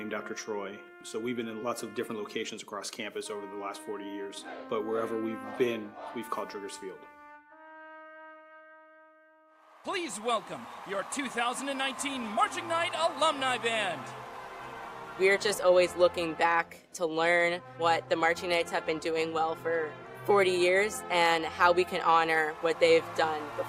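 Nothing here catches the ear as a technical fault at any point, so there's really nothing to flag.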